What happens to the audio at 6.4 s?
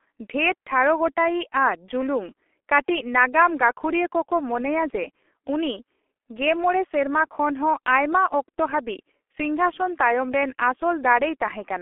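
At 6.4 s, as across the whole speech clip, G.723.1 codec damage is present. Its coarse, low-rate voice model, nothing above 3.8 kHz, leaves muffled, hoarse speech with smeared consonants.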